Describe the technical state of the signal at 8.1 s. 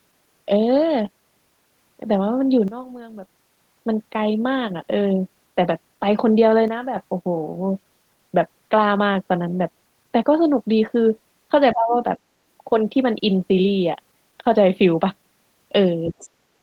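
At 8.1 s the speech signal is intact, with no dropout, clipping, glitch or other fault present at that point.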